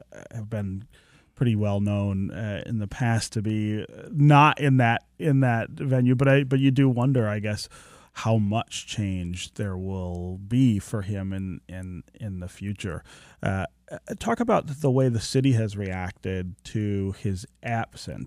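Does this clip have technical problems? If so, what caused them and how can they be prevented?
No, nothing stood out as a technical problem when listening to this speech clip, so there is nothing here that calls for prevention.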